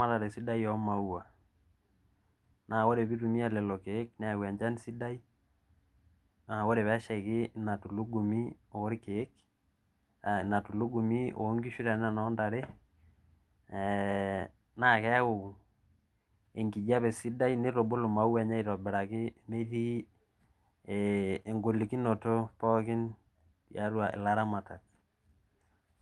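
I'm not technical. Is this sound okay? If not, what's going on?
Yes, the speech comes through without technical faults, and what you hear reflects an ordinary internet call connection that trims the very highest frequencies, above about 12 kHz.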